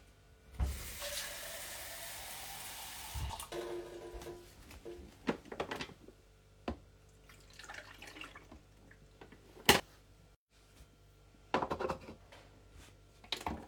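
At 2.23, 3.30, 6.27, 8.59, 9.80 and 12.03 s the everyday sound jumps ahead with no gap, likely dropped buffers (overruns). Roughly 50 ms vanishes at most points, about three times that at 6.27 and 9.80 s. Each shows as a waveform discontinuity and a thin vertical spectrogram line.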